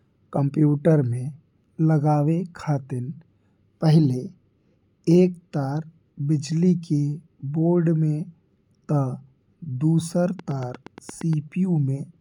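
Likely interference injects a train of clicks from 10.39 to 11.34 s, about ten evenly spaced pops at 8.5 per second, around 5 dB above the speech.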